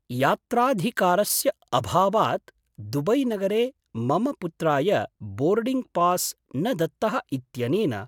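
No technical faults can be heard anywhere in the speech recording. There is nothing to place on a timeline and nothing to describe.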